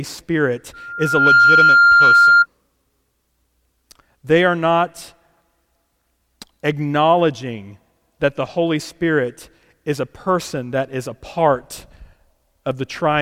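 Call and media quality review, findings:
Loudspeaker feedback squeal, 0.73–2.46 s: mic–speaker loop gain above one at 1.4 kHz; tone swells within half a second to roughly 10 dB over speech.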